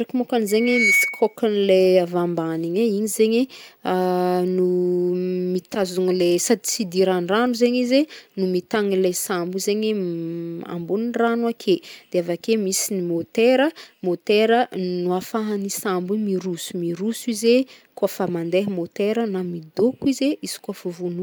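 From 0.48 to 1.36 s a loudspeaker feedback squeal rises at 2.2 kHz, swelling over roughly 0.4 s to about 5 dB above the speech. The microphone is re-amplifying its own loudspeaker, and at this frequency the loop gain exceeds one. Unlike a steady tone, it grows by itself.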